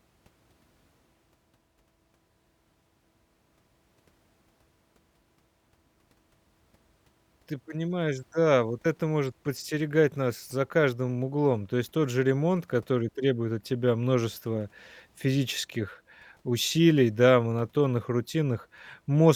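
No technical faults can be heard anywhere in the recording.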